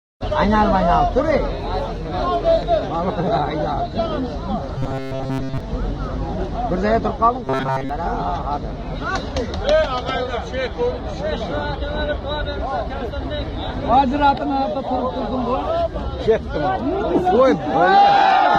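At 4.78 s the sound suddenly goes robotic until about 5.60 s, then does it again from 7.44 to 7.89 s. It's the robotic sound from repeated short buffers. There's a hard metallic buzz locked at 133 Hz. That fits a chunk of about 7.5 ms being looped, likely because fresh audio wasn't arriving in time. Most of each stretch is repeats rather than real material, so only the rough shape of the sound survives.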